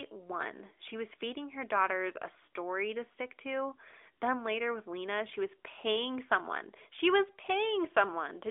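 No technical faults can be heard in the signal, which has the narrow band of an AMR narrowband mobile call, with content confined to roughly 300 Hz to 3.5 kHz and a light coding texture that fits a 12.2 kbps AMR-NB stream.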